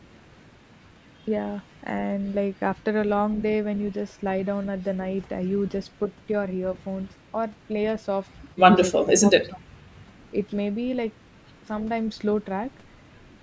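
At 6.05 to 6.1 s the voice dips briefly by a few decibels, then at 9.18 to 9.29 s and again at 9.48 to 9.71 s it drops much harder, close to 20 dB down. That pattern is likely speech suppressed in double talk: the echo canceller mistook overlapping talk for echo and ducked it. The call processing's band-limiting, with nothing above 8 kHz, is separate.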